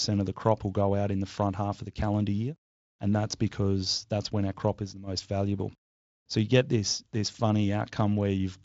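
Nothing in this speech clip stood out as a technical fault on listening.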